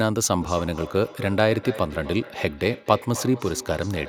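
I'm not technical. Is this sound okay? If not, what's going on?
No. Two devices in the room share the call, causing feedback echo between two devices: from 0.36 s onward, the speech repeats about every third of a second, thinner and ringing.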